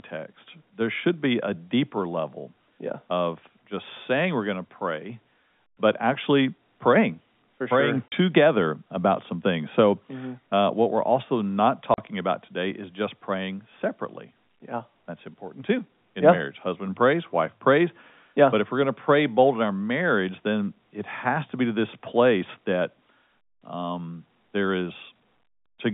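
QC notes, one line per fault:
8.08–8.12 s and 11.94–11.98 s, packet loss filled with silence: the speech drops out abruptly for 40 ms each time, the second gap falling between "what we're also not" and "about today is just". Each hole fits two lost 20 ms packets that the receiver replaced with silence.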